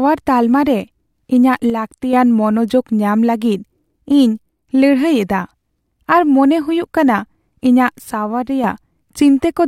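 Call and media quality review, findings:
One channel drops out, likely an intermittent stereo channel upstream of the mono downmix. Three events: 1.70–2.13 s, 4.37–4.69 s, 8.13–8.64 s, each about 0.3–0.5 s. Speech common to both channels loses half its contribution, so level falls abruptly by about 6 dB, then snaps back. Anything carried only in the lost channel vanishes for those spans.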